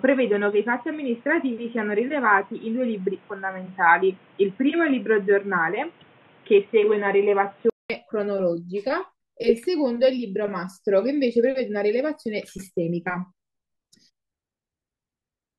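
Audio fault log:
0.0 to 7.90 s, input switched to a poorer device: the speech sounds dull and boxy, with nothing above 3.8 kHz and a faint added noise floor well below the speech. Near 7.9 s a gap of about 200 ms is followed by fuller, brighter sound at much the same loudness. This is likely a change of capture device, from a narrowband microphone or headset call profile back to the regular input.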